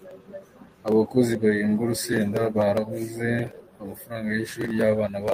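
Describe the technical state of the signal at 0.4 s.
At 0.4 s the signal sits inside a clock drift between sender and receiver that runs through the whole recording. The sender's clock runs roughly 3 percent slow, so the receiver's jitter buffer keeps draining and the playback pace feels slightly uneven.

That moment also falls within repeated timing corrections spanning 0.06 to 5.12 s. To keep pace with the slow sender, the receiver repeats short fragments, in total adding something like 150 ms and running at 97 percent speed. These are heard as faint, irregular hiccups.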